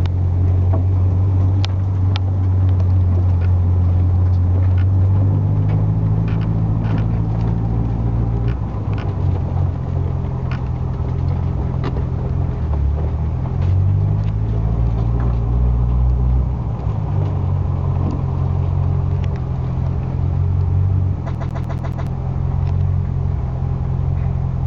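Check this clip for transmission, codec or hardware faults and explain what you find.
One hardware fault appears near the end: the CD is stuck on one turn from 21.35 to 22.07 s. A scratch on the disc knocks the laser back by one track at the same point on each rotation, so the player keeps rereading the same stretch. The result is a 0.14 s fragment of audio repeated five times, each pass broken by a brief mute at the jump, giving the quick, regular stutter of a skipping CD.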